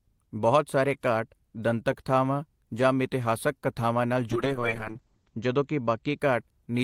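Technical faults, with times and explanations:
4.31–6.25 s, call bitrate drop. The speech turns rough and muffled, with nothing above 8 kHz. The encoder was starved of bits, which fits a fall from 32 to 8 kbps. The worst stretch lasts about 1.07 s before quality recovers.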